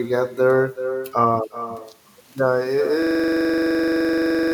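From the start of this speech clip, the far end is playing the call through a loudspeaker and its microphone is picking it back up, with no echo canceller to remove it. This echo with no canceller returns the talker's own speech after the network round trip of roughly 0.4 s, about 10 dB below the original. Every phrase is trailed by a quieter, thinner copy.

At 3.02 s the system hangs, and the hang loop runs to the end. The computer or driver has stalled while the audio hardware keeps replaying the same ring buffer, so one 42.7 ms slice of sound repeats exactly, dozens of times over. That loop length fits a 2048-sample buffer. At 23.4 repeats per second it comes across as a hard, mechanical buzz-stutter that replaces the speech entirely.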